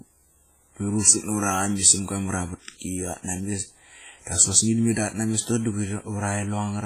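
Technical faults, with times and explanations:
Throughout, WMA compression: the speech has likely passed through a low-bitrate Windows Media Audio encoder, which fits a rate around 24 kbps, and the damage is heavy. The transform coder spreads its quantisation error over long blocks and drops weaker spectral lines, so the sound rings and smears, with a washy hiss that swells and fades with each syllable. Nothing survives above about 15.3 kHz.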